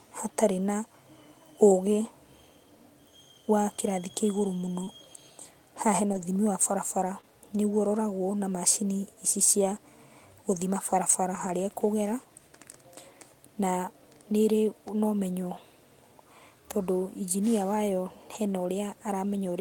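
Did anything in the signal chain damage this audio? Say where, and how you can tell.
Yes. The damage happened on the network, in transit to the receiving decoder. There was short concealed packet loss at 4.83 to 4.89 s, where about 40 ms of audio never arrived in time and about 33 ms was synthesised to cover it. It happened again at 7.21 to 7.25 s, with about 20 ms missing. At both points the receiver extended the preceding sound and then blended back into the real signal. You hear it as a brief smear or wobble.

The same network stage also caused a lost packet rebuilt from error correction. There is no gap at these points. The decoder played low-bitrate backup copies carried in the following packets, so those stretches sound rougher and noisier. This occurs for about 20 ms at 4.87 to 4.89 s, inside the concealed stretch. It also occurs for about 60 ms at 6.13 to 6.23 s, for about 80 ms at 11.35 to 11.49 s, and for about 20 ms at 18.35 s. 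These lengths fit runs of 20 ms packets.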